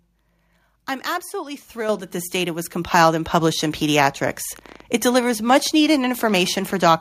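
At 1.89 s, after "I'm absolutely", and at 2.91 s, after "that this data was", the microphone volume steps up about 7 dB, then about 4 dB, jumping voice and background together. From 4.59 to 6.89 s a train of clicks, around thirty similar pulses at an uneven 10.5 per second, ticks over the speech at roughly its level, likely from nearby interference.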